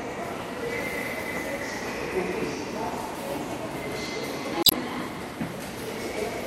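At 4.61 s, lasting about 0.12 s to 4.73 s, damaged data in the compressed stream makes the decoder misread frames and lose sync, giving a brief glitch. A spectrogram shows a short smeared broadband patch; the waveform shows an abrupt discontinuity.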